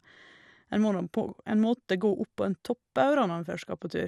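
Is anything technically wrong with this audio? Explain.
Yes, the speech has MP2 compression damage running the whole way through. It sounds dull and gurgly, with a grainy edge. That's likely Layer II coding starved of bits, which fits something around 80 kbps: upper sub-bands drop out and flicker, and what's left is coarsely quantised.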